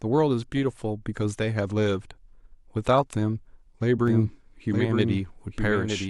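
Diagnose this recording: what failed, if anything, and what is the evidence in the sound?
Doubled audio track from 4.08 s to the end of the speech. At 4.08 s a second, full-band copy of the speech cuts in abruptly, trailing the original by roughly a second and sitting about 5 dB below it. It carries no reverberant tail or room colour, so it is not an acoustic echo. The cause is likely at the capture or editing stage: either a slower second path recorded the same signal, or an edit left two misaligned copies overlapping.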